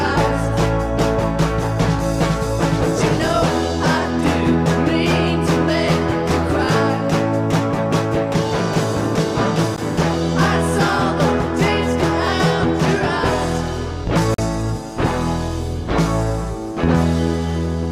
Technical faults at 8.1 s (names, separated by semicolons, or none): none